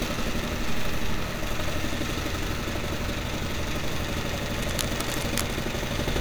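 From 4.48 to 5.62 s there's a burst of cable scratch noise, dense, uneven scratching and rustling sitting roughly 10 dB under the sound. Most likely a worn cable or connector got moved, so its contact resistance jumped around and spat noise into the signal.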